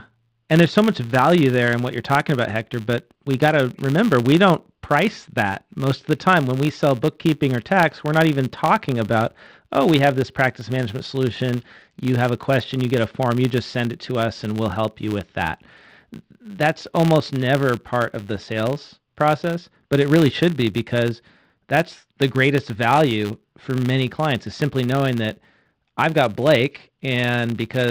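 A filter restarted on every block runs through the whole of this speech recording. The filter discards its internal state at each block boundary and begins again from silence, so every block opens with a small transient. Those transients repeat at 100 Hz, which points to processing blocks of 10 ms, and they merge into a steady buzz beneath the speech that grows louder and quieter with the level of the signal.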